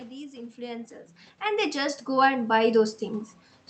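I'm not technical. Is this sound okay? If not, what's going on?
No. From about 0.55 to 3.29 seconds, the voice and the background noise swell up together, steadily getting louder. That's automatic gain rising: the system judged the input too quiet and slowly turned up its own volume, lifting everything at once.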